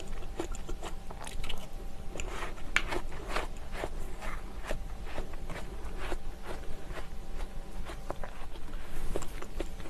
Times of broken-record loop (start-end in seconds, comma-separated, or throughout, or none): none